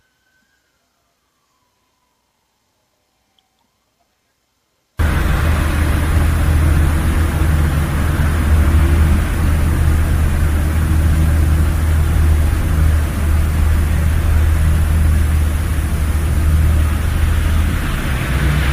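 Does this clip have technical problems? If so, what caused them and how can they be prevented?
No, nothing in this clip stood out as a technical problem on listening, so there is nothing here that calls for prevention.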